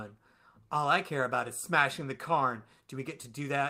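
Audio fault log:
Nothing to log here; I listened to this speech clip all the way and there's nothing worth flagging.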